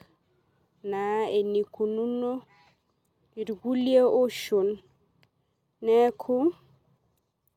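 Nothing in the speech stood out as a technical fault on listening.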